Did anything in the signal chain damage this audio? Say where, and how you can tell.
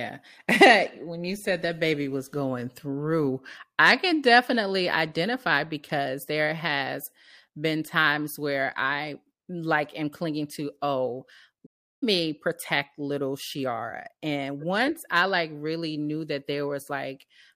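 Yes. There is a playback stall at 11.66 to 12.03 s. The speech halts after "am clinging to oh" and goes silent for about 0.36 s, then resumes with "me protect little". This points to the playback stage, likely a player that ran short of data or had its thread blocked.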